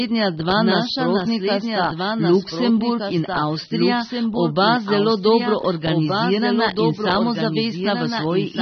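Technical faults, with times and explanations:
throughout, doubled audio track: A second, complete copy of the speech runs about one and a half seconds behind the first, roughly 5 dB quieter, so every phrase is heard again while the next one is already under way. The late copy is full-band, with no reverberant tail or room colouring, which separates it from an acoustic echo. It most likely comes from the signal being captured twice, once through a slower path, and both copies being mixed into the output.
throughout, AAC compression: Nothing is present above 6.3 kHz, so the speech sounds dull and muffled, with sibilants losing their edge. The codec damage is plainly audible. Sustained vowels carry a warbling, watery texture, and the upper band sounds fizzy and smeared where coarse quantisation has left gaps in the spectrum or replaced detail with noise. The low cut-off and plainly audible artefacts fit AAC-LC at a low bitrate around 24 kbps, the likely cause.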